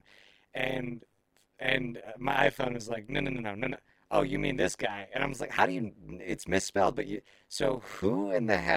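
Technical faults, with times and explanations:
Throughout, overlap-add ripple. The speech was rebuilt from windowed frames whose overlap does not sum to a steady gain. Level dips by about 60 dB once per frame, roughly 100 times a second. This gives a harsh, buzzy, robotic flutter.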